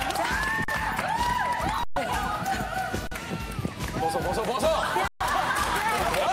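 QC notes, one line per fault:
0.64 s, 1.84 s, 3.07 s, 5.08 s: underrun with held sample. The output buffer ran dry and the converter held its last value, so the sound freezes flat for about 43 ms, 128 ms, 43 ms and 128 ms. The shorter gaps fit a 2048-sample buffer. Nothing is skipped, so each resumes softly.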